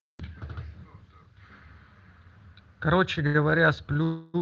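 Speech carried over a WebRTC call path, with the top end rolling off around 8 kHz and the light coding texture typical of an Opus stream at a modest bitrate, has two timing faults. From 3.27 to 3.36 s a sound is held too long, with a faint buzzy smear, before the speech carries on without losing anything. This is a short stall from a late packet: a packet had not arrived when it was due, so the jitter buffer ran dry. The receiver stretched the last sound for about 75 ms until the packet turned up, then resumed from the same point. From 4.03 to 4.36 s the audio freezes for about 307 ms. The last sound is drawn out into a buzzy, hissy tail that fades but never reaches full silence, and then the speech picks up where it stopped with nothing missing. This call audio freeze is likely caused by packets held up in transit, which emptied the jitter buffer until they arrived and inserted a gap into the speech.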